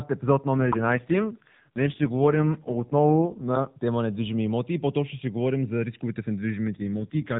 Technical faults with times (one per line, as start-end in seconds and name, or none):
0.58-3.74 AMR rate drop
6.68-7.39 AMR rate drop